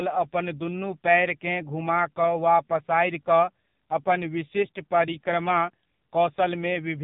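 AMR narrowband mobile codec damage runs throughout this speech clip. Nothing above 3.8 kHz survives, and the heavy buzzy, synthetic quality fits a low mode around 5.9 kbps. There, a vocal-tract model excited by a few pulses per 5 ms subframe rebuilds each 20 ms frame only coarsely.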